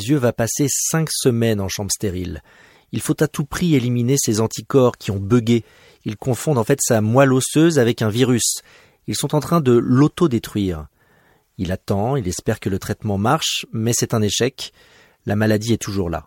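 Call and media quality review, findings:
No faults found; no defects identified in this speech.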